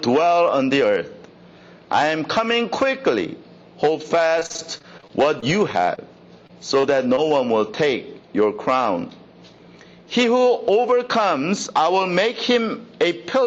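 Gain pumping runs through the whole clip. The level swings by about 10 dB, likely from excessive gain driving a fast limiter. Repeated packet loss produces choppy, robotic sound from 4.39 to 5.99 s and again from 6.47 to 7.32 s. Short holes, up to 36 ms long, are patched by stretching the previous sound.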